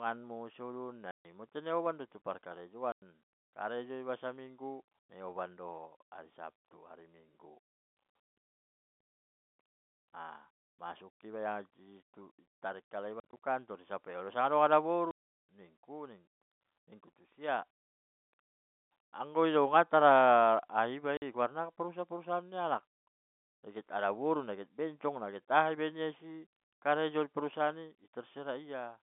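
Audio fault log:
1.11 to 21.22 s, packet loss filled with silence: dead gaps of 140 ms at 1.11 s, 100 ms at 2.92 s before "karejo iba saminggu", 50 ms at 8.10 s after "hari sabtu hari minggu", 110 ms at 13.20 s (scattered over 200 ms, longest run 40 ms), 170 ms at 15.11 s before "nikku tusia", and 50 ms at 21.17 s. All are multiples of 10 ms, which fits 10 ms packets. Hard edges and true silence, not smeared or repeated sound, distinguish these from concealment, beneath the narrow G.711 telephone band.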